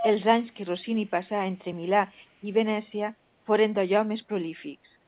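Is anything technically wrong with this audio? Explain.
Yes. The speech carries an echo leak in two places. From 0.00 to 0.11 s a delayed copy of the talker returns about 354 ms late and fairly strong, only a few decibels under the direct speech. From 1.06 to 1.10 s it comes back again at the same delay but very faint, roughly 40 dB down. This is likely a far-end loudspeaker feeding its microphone while the echo canceller failed to subtract all of it, so the residue was sent back. What separates it from room reverb is the fixed, discrete 354 ms lag: a distinct repeat rather than a smooth tail. Underneath, the call path's narrowband coding leaves nothing above 4 kHz, which fits G.711 mu-law at 64 kbps.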